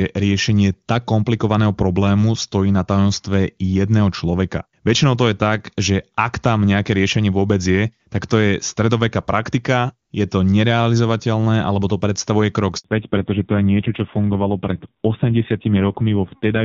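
At 12.78 s, just after "alebo to predstavuje krok", a handover gap occurs. The call switched networks, and the sound cuts out for 60 ms while no frames arrive.

From 12.84 s to the end, a fallback to narrowband follows. The clear HD Voice sound gives way to one with nothing above 4 kHz, duller and rougher, which fits a low narrowband rate around 5.9 kbit/s.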